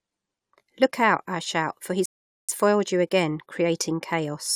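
At 2.06 s, right after "out I shout for", the speech drops into silence for about 0.43 s, then picks up at 2.49 s with "foiled you again" exactly where it left off. That's a rebuffering stall: the player ran dry, waited, resumed, losing nothing but adding a gap.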